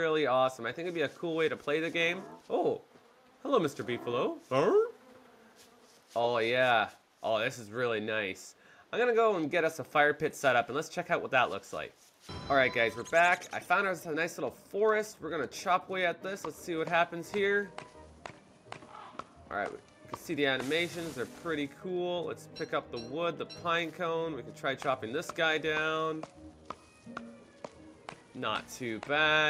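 No technical faults can be heard anywhere in the audio. Nothing in the sound calls for comment.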